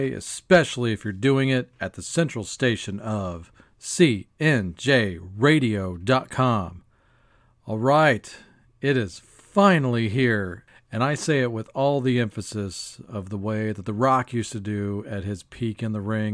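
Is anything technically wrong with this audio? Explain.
No, nothing technically wrong turns up anywhere in this speech recording.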